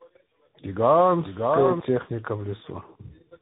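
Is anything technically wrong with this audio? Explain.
Yes. Throughout the speech there is tandem speech coding: two speech coders in a row, pointing to an AMR-style coder followed by CVSD, the second re-encoding the first's errors. It sounds rough, warbly and muffled, with nothing above 3.8 kHz. A single narrowband codec would cut the treble without this compounded graininess.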